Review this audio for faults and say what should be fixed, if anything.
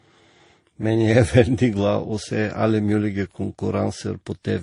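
Throughout the speech, nothing is heard above 10.5 kHz. Two kinds of coding smear overlap. This is likely transcoding between lossy codecs. It sounds like a low-rate Vorbis encode re-encoded as low-rate MP3. The second coder spends bits on the first one's artefacts and adds its own. Prevent this by encoding only once, directly from the original uncompressed source.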